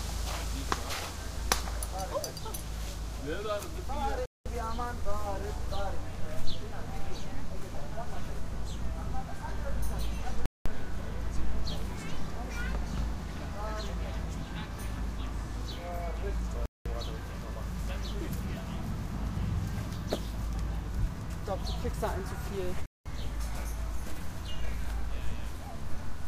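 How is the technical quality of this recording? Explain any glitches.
Four short dropouts interrupt the sound, all the same kind: gaps between chunks. They occur at 4.26–4.46, 10.46–10.66, 16.66–16.86 and 22.86–23.06 seconds, each 200 ms of silence. The audio arrives in 6-second blocks, and an empty stretch sits at each join rather than the next block following seamlessly. Nothing is missing from the recording itself. The effect is a regular stutter roughly every six seconds.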